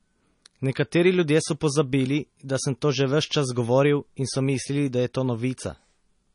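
Speech with plainly audible MP3 compression throughout. Nothing survives above 10.6 kHz, and the damage likely comes from a starved encoder, which fits roughly 32 kbps.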